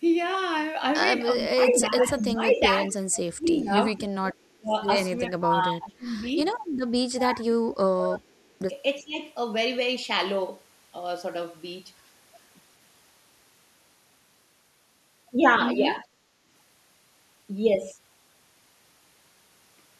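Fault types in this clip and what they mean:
Speech suppressed in double talk: at 1.35–4.03, 4.51–4.73, 5.29–6.27, 7.11–8.37, 9.0–9.17 and 16.01–16.05 s, the speech sinks in level, by up to about 30 dB at the deepest. This is likely an echo canceller that, with both ends talking at once, could not tell the near talker from loudspeaker echo and turned everything down. The longest stretches are near the start.
Echo leak: from 1.73 to 2.58 s, a second copy of the speech trails the original by about 367 ms and arrives at roughly the same loudness. The likely cause is a loudspeaker on one side of the call whose echo canceller let part of the sound picked up by its microphone pass back into the call. The leak falls inside the first stretch of double-talk suppression.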